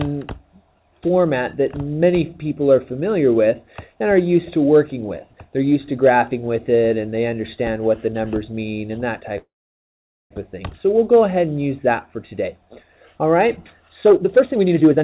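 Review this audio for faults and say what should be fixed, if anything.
Packets were likely held up in transit, leaving the jitter buffer empty from 9.38 s to 10.34 s. This call audio freeze continues the last sound briefly, then drops into silence for most of the 0.93 s gap. The audio resumes where it stopped, with nothing lost but everything after it arriving about 0.9 s later. A larger or adaptive jitter buffer, together with better network prioritisation for the call stream, would ride out delays of this length.

From 14.06 s to the end, the jitter buffer held more audio than its target, so the receiver cut out short pitch-period pieces again and again. This jitter buffer speed-up plays the audio at 160% speed with unchanged pitch, discarding roughly 0.7 s and sounding hurried. Draining the buffer excess more gradually, with gentler time compression spread over a longer stretch, would prevent the rushed sound.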